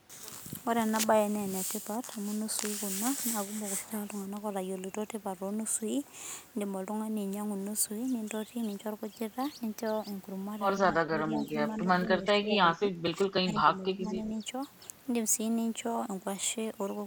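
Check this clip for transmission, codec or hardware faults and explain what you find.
Speech is suppressed in double talk at 10.81 to 11.51 s, 11.81 to 11.87 s and 12.18 to 14.39 s, likely because an echo canceller mistook the talker for loudspeaker echo while both ends spoke and attenuated everything. The voice sinks by up to about 15 dB, briefly by only a few dB, and stays turned down through most of the longest stretch.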